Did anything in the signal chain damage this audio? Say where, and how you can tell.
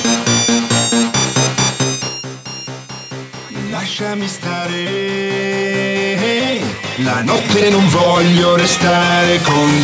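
Yes. Computer activity noise enters in the analogue wiring and runs through the whole clip. A buzzing pulse at around 200 Hz sits roughly 25 dB below the sound. It follows the computer's load, not the audio. Processor or graphics load is shifting the shared ground.

Gain pumping is present throughout, at the input stage. The gain swings by around 10 dB. Loud and soft parts are squashed together. The likely cause is input gain set far too high, with a fast limiter pulling it down.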